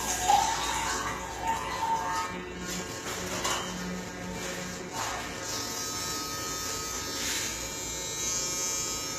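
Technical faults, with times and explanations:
Throughout, HE-AAC compression: the treble is likely rebuilt by band replication and ends at 14.9 kHz, with plainly audible metallic grit that fits roughly 20 kbps.
6.66 to 9.19 s, switching supply whistle: a faint tone, around 30 dB below the sound, wanders between 2.62 and 3.02 kHz as a power supply shifts its switching rate.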